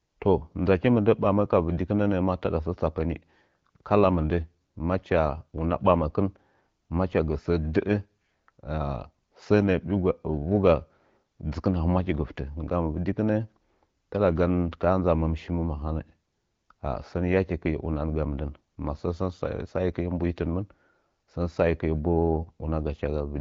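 No technical faults turn up anywhere in the speech. It carries the light coloration of the AMR wideband (HD Voice) codec at 12.65 kbit/s, with nothing present above about 7.4 kHz.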